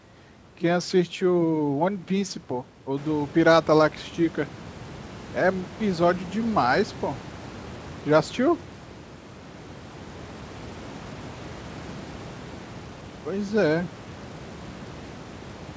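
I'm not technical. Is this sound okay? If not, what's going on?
Yes, it sounds fine: the background noise of the room gets noticeably louder around 3 seconds in, but it stays well under the speech, and the slightly narrow, phone-call quality is just how calls normally sound.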